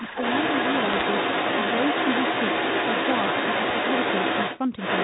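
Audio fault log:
0.0 to 4.59 s and 4.78 to 5.04 s, other side's voice leaking through: a second voice runs under the talker almost the entire time, breaking off only briefly near 4.6 s. It sits at roughly the talker's own level or a touch above, so it competes rather than lurks. The likely cause is the far end's audio playing from the talker's loudspeaker and reaching the microphone, with the echo canceller failing to strip it out before sending.
0.92 to 1.02 s, bit errors on a digital phone line: a short burst of sharp ticks and crackle lands on top of the speech for about a tenth of a second, while the speech itself carries on unchanged beneath it. Each tick is a single corrupted sample on the G.711 link, where a flipped sign or high-order bit throws that sample far from its neighbours. The density suggests an error rate around half a percent, spread over a handful of consecutive frames.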